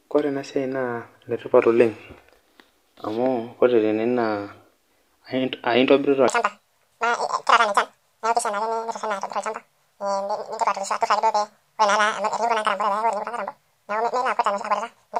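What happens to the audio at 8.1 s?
A section at the wrong speed runs from 6.28 s to the end: doubled playback, likely a clock mismatch, makes speech hurried and almost an octave higher.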